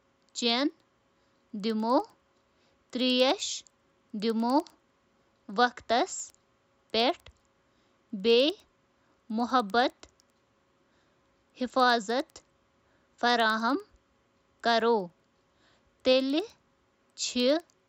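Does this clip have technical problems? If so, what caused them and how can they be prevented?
Yes. Throughout the speech there is a faint, regular ticking at 10 Hz, present only while there is signal, caused by a resampler restarted on every block. The 16 kHz to 48 kHz conversion was run on each 100 ms block separately, so each block edge lacks its real neighbouring samples and picks up a small error. A spectrogram shows thin vertical lines every 0.1 s over the voiced regions, and a zoomed waveform shows tiny steps at those boundaries. To prevent it, run one continuous resampler that keeps its filter state from block to block.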